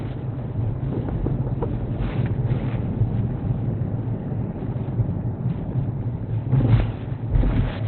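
From start to finish the audio is band-limited, with nothing present above about 4.2 kHz, and it sounds muffled and hoarse throughout. The likely cause is Opus compression at a low rate, where the encoder has dropped into its narrowband speech-oriented mode, which fits a bitrate around 16 kbps. That mode discards the upper spectrum outright and models what remains coarsely, so the everyday sounds lose their crisp edges and take on a rough, dulled texture.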